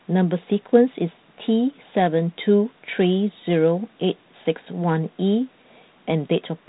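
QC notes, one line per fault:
No faults to log here, just ordinary speech over a G.726 ADPCM telephone path that tops out around 3.9 kHz and carries the light coding grain you'd expect from a 32 kbit/s setting.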